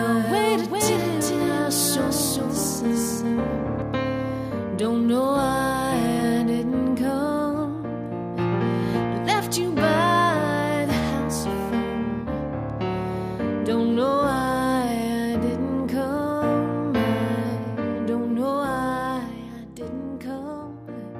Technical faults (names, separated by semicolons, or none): doubled audio track